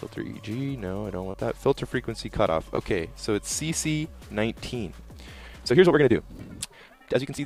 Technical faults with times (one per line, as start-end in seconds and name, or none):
1.31-1.35 short concealed packet loss
2.75-2.79 short concealed packet loss
5.40-7.45 time-stretched section